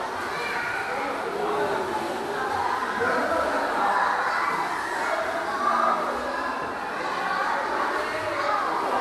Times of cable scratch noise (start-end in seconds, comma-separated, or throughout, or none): none